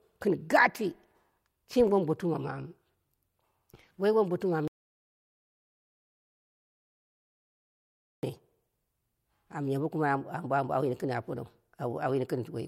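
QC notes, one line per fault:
4.68–8.23 s, audio dropout to silence: the speech cuts off abruptly mid-flow and the track falls to silence for about 3.55 s, with no room tone or noise floor underneath, before the speech resumes just as suddenly. The likely cause is that the input signal was lost, through a disconnected device, a broken link or an accidental mute, while recording carried on writing silence, so whatever was spoken in that stretch is unrecoverable.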